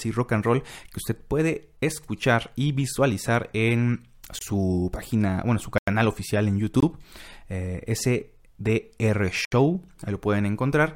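Short, hard dropouts cut the speech four times, each a block of digital silence. At 4.39–4.41 s, after "escuchar y visualizar en", a 23 ms gap sounds like a short hole. At 5.78–5.88 s, before "oficial en", a 93 ms hole is heard. Another 23 ms hole follows at 6.80–6.83 s, then a 70 ms gap at 9.45–9.52 s. The output buffer was likely not filled in time and zeros played instead, which fits 1024- and 4096-sample buffers.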